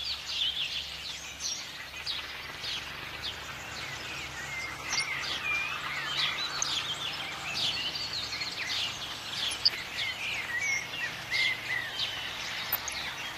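Throughout the clip the sound is dull and granular, with a gurgle under it. Upper frequencies come and go. That is MP2 compression, likely from MPEG Layer II coding at a low bitrate, and what we hear fits something around 80 kbps. The coder splits the sound into sub-bands and runs short of bits, so high bands switch off and the rest are coarsely quantised. The damage is plainly audible.

Over this, DAB burbling breaks in four times: 4.93 to 5.03 s, 6.58 to 6.83 s, 9.47 to 9.93 s, and 12.49 to 12.93 s. Each burst puts short blips of noise into single sub-bands. The cause is weak reception. Bit errors at a fraction of a percent get past the error correction and corrupt samples and scale factors. The later two bursts last longer and span more frames than the first two.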